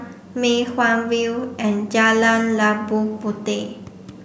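No faults can be heard anywhere in the speech; nothing drops out, clicks, distorts or breaks up at any point.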